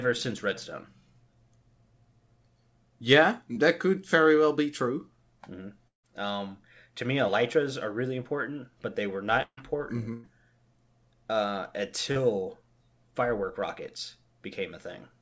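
Short concealed packet loss first appears at 3.54 s, just before "could very well be": about 20 ms of audio never reached the decoder in time, and the receiver extended the preceding sound to cover it, leaving a brief smear. From 5.88 to 6.05 s, a long network dropout is the likely cause of about 160 ms going missing. The receiver continued the last sound briefly, then about 120 ms of that span fell to silence, and the audio resumes further on without the lost part. At 7.27 s, between "to me" and "are really important but", another 20 ms short concealed packet loss leaves a brief smear. From 9.42 to 9.59 s, after "important but they were", a burst of packet loss removes about 160 ms: the decoder held and faded the last sound, and about 60 ms of that gap is silent before the audio picks up past the missing piece. A second burst, at 10.13 to 10.26 s, loses about 100 ms, and this one is filled entirely by a fading continuation with no silent stretch. 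The last short concealed packet loss, at 12.12 to 12.17 s, covers about 40 ms and is heard as a slightly longer wobble. Throughout, the call codec passes nothing above 8 kHz, which fits G.722 at 64 kbit/s.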